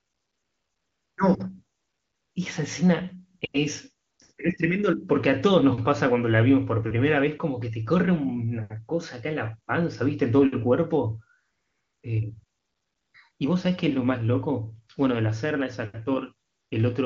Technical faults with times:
0.00-1.17 AMR comfort noise
1.77-2.35 AMR comfort noise
3.39-3.53 AMR comfort noise
4.07-4.37 AMR comfort noise
11.39-12.03 AMR comfort noise
12.43-13.39 AMR comfort noise
16.47-16.71 AMR comfort noise

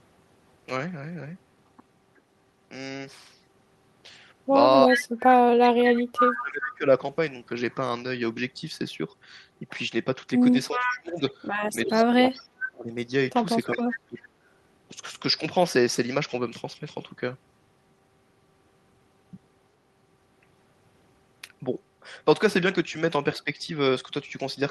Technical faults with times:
4.86-6.86 speech suppressed in double talk
4.91-4.99 echo leak
5.63-6.64 echo leak
10.69-11.20 speech suppressed in double talk
10.72-11.31 echo leak
11.86-12.91 speech suppressed in double talk
13.69-14.28 speech suppressed in double talk
23.44-23.50 speech suppressed in double talk

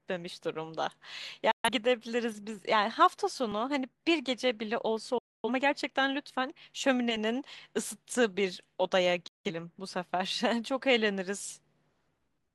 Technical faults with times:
1.51-1.69 digital broadcast dropout
3.52 audio missing between chunks
5.18-5.49 digital broadcast dropout
9.28-9.51 digital broadcast dropout

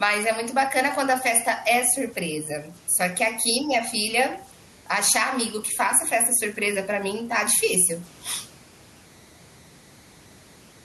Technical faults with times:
0.00-10.84 converter idle tones
0.00-10.84 gain pumping

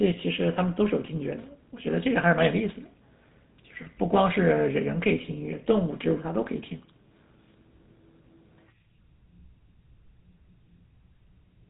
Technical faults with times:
0.00-11.69 GSM full-rate codec

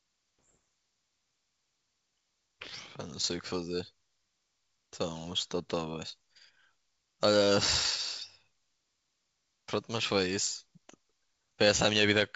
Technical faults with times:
0.45-0.56 bit errors on an ADPCM link
6.09 bit errors on an ADPCM link
7.77-7.86 bit errors on an ADPCM link
10.47-10.52 bit errors on an ADPCM link

